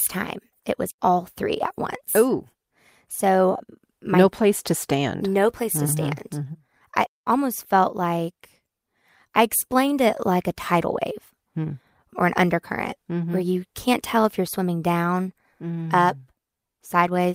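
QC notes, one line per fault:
No technical faults are audible anywhere in the recording, and the signal stays steady and intact throughout.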